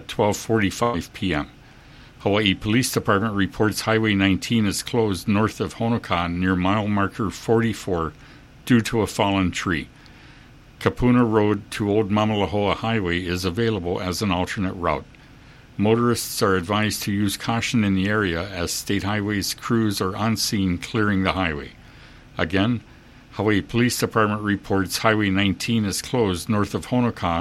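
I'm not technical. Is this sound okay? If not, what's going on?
No. At about 0.83 to 0.95 s there is a burst of packet loss. Some audio never arrived in time. The player stretched the last sound for about a tenth of a second, fading it out. Then the sound jumps ahead, with roughly 100 ms missing.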